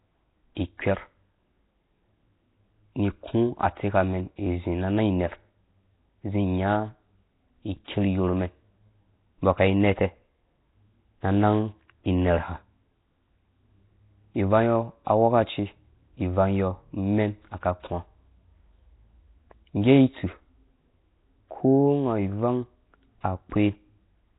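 Throughout, the speech sounds rough, hissy and smeared, as if underwater, with nothing above 3.8 kHz. This heavy damage likely comes from Nellymoser compression, fitting around 16 kbps, which fills starved bands with noise. A spectrogram shows a flat 3.8 kHz ceiling and grainy fill between harmonics.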